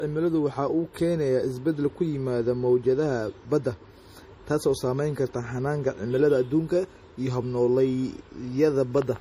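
From start to finish the speech carries plainly audible MP3 compression damage, likely from a low-bitrate encode, the sound fitting something around 40 kbps. Weak frequency lines drop in and out from frame to frame, so the whole thing has a watery, swirly texture, and consonant attacks come out smeared rather than crisp.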